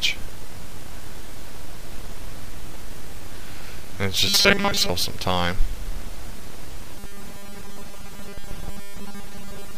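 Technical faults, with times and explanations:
4.28 to 4.89 s and 6.96 s to the end, robotic sound from repeated short buffers. The sound turns into a rigid, metallic buzz at 200 Hz that only loosely tracks the original. Fresh audio likely arrived too seldom, so playback kept looping the last 5 ms of sound. That fixed loop length imposes the 200 Hz pitch. Most of the real audio in these spans is skipped and replaced by repeats.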